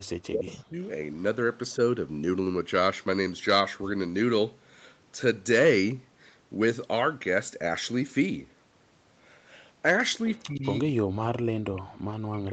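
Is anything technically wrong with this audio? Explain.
Yes. Speech suppressed in double talk, likely from an echo canceller that couldn't tell the near talker from loudspeaker echo while both sides spoke, pulls the audio down from 0.31 to 0.81 s by up to about 30 dB, from 10.35 to 10.64 s by about 15 dB, and from 10.88 s to the end by up to about 40 dB, leaving dips and broken fragments.

Echo leak, likely residual loudspeaker pickup that the loudspeaker side's canceller failed to remove, sends back a copy of the speech 117 ms late. It appears as short scraps at 0.47–0.54 s (about 20 dB below the speech), 1.71–1.75 s (about 40 dB below) and 11.77–11.81 s (about 25 dB below).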